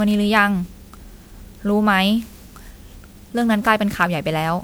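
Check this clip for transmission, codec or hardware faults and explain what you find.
There is one codec fault, and it runs through the whole speech clip.

Generation loss, from start to finish: the damage is most likely from repeated lossy re-encoding. The sound fits MP3 at 128 kbit/s applied around ten times over. Each new encode quantises the already-damaged signal again on a shifted frame grid, so noise and spectral gaps pile up pass after pass. The speech comes out swirly, smeared and hollow, worse than a single 128 kbit/s encode would sound, and consonant attacks are blurred.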